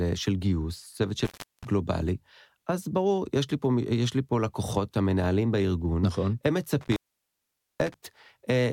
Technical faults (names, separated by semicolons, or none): intermittent contact